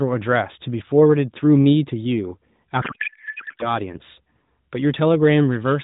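From 2.82 s to 3.74 s the speech turns into garbled noise and warble that barely tracks it, a codec payload misread. The decoder is taking frames in the wrong packing, which fits octet-aligned AMR being read as bandwidth-efficient, so every parameter lands in the wrong field. Around this, the AMR narrowband coding itself sounds only lightly buzzy.

At 4.09 s a loudspeaker feedback squeal begins: a single tone at 4.8 kHz swells over roughly a second and a half to about 5 dB above the speech and holds to the end. The microphone is picking up its own loudspeaker, and at that frequency the loop gain exceeds one.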